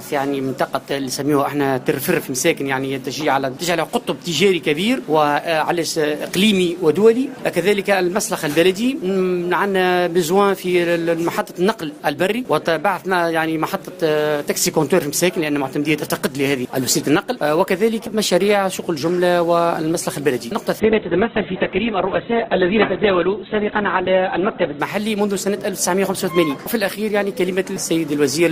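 An adaptive stream at a lower bitrate runs from 20.8 to 24.8 s. The connection slowed, so playback switched abruptly, without a gap, to a much leaner encoding. Nothing above 4.2 kHz survives, and codec artefacts rise in a way that fits Opus falling from about 64 to 8 kbit/s.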